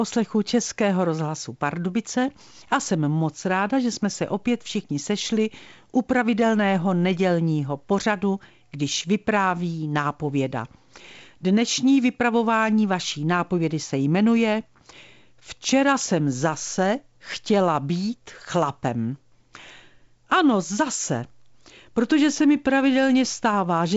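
Nothing stood out on listening to this speech, which carries the band-limited character of G.722 wideband telephone coding, with no content above about 7.7 kHz.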